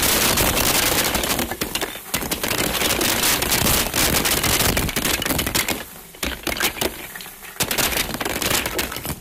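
An integer overflow runs through the whole clip: the signal is driven about 15 dB past full scale, and instead of being limited at the largest integer value, each sample that goes over wraps around to the opposite extreme. Only around three percent of samples cross the limit, but every one of them jumps across the full range, so the louder moments of these sounds break into violent, sharp cracks far harsher than ordinary clipping.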